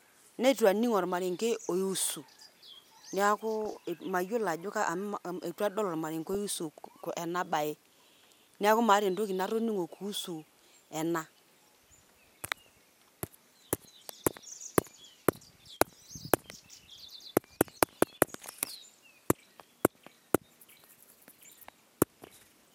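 Short blips of noise break over the speech from 3.61 to 3.73 s and again at 6.33 s, between "eitu adol ormarenke" and "oiusu ena bae". This is DAB burbling: bit errors slipped past error correction into the MP2 audio data, so wrong samples put short blips of noise in single sub-bands.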